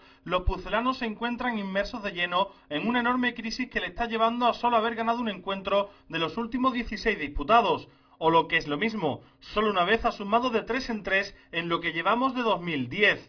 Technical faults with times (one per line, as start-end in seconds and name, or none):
none